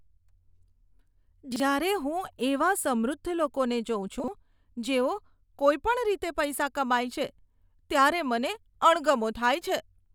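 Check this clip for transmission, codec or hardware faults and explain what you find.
Two faults of one kind. Chunks out of order at 1.52–1.6 s and 4.2–4.28 s: a 40 ms chunk plays one slot late, so the sound jumbles briefly.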